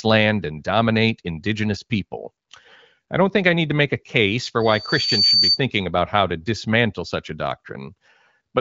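A microphone is picking up the loudspeaker it feeds, and at 4.6 kHz the loop gain tips above one, causing loudspeaker feedback squeal in this speech recording from 4.60 to 5.61 s. A piercing tone swells over roughly 0.7 s until it sits about 5 dB above the speech. The speech itself carries the light damage of the AMR wideband (HD Voice) codec at what sounds like one of its higher rates.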